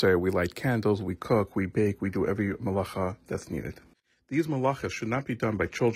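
After "light candles", at 1.09 s, an adaptive stream at a lower bitrate takes over to the end. The treble turns thin, with nothing above 14.9 kHz, which fits a switch from 96 kbit/s AAC-LC to 20 kbit/s HE-AAC. Unlike a dropout, the change is instant, with no gap.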